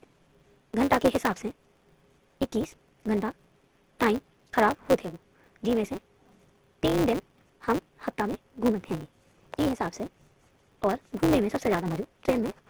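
From the first moment to the end, the speech sounds dull and smeared, with two different kinds of coding grit layered together. That's likely transcoding between lossy codecs, probably low-rate HE-AAC at 16 kbit/s re-encoded as Opus at 16 kbit/s.

A block size mismatch (truncated) runs through the whole clip too. The tail of every block gets dropped, leaving a steady 188 Hz buzz, which fits a stage reading 256-sample blocks. The speech races along about 1.88 times too fast while keeping its timbre.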